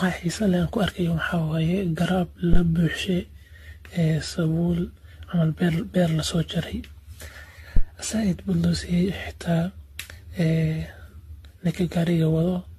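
From the first second the speech has a swirling, hollow quality, with consonant attacks smeared and a watery shimmer around vowels. This is generation loss: the audio was likely decoded and re-encoded around ten times with a lossy codec, the character fitting AAC-LC at about 64 kbit/s. Each pass quantised on a shifted frame grid, so the errors compounded. A spectrogram shows a hard ceiling at 14 kHz, with patchy holes and speckled blocks across the upper bands.

At 2.53 s, just after "waye garaab", a deep phantom power thump cuts in, lasting until 2.63 s. It comes from a supply switching on a live input, with the voltage step passing through the coupling capacitors into the signal. It sounds like a dull, low blow, dying away within about 21 ms. The waveform shows a single large low-frequency excursion with a quick exponential tail, and the spectrogram shows a brief dark smear at the very bottom.

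A second phantom power thump runs from 7.77 s to 7.84 s, immediately before "zaaid bud loo". It has the same supply-switching cause and the same deep, blunt knock, decaying a little faster this time, in about 17 ms. On the waveform it appears as another lopsided low-frequency swing standing out from the speech envelope. The spectrogram shows a short vertical band of energy concentrated below a few hundred hertz.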